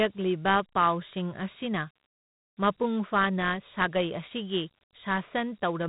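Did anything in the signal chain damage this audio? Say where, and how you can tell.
Yes, at the codec stage, which applies Dialogic VOX ADPCM throughout. Nothing remains above 3.8 kHz, and a plainly audible gritty hiss tracks the speech. Coding each sample as a coarse 4-bit step adds that grit, and the damage fits a 32 kbps stream.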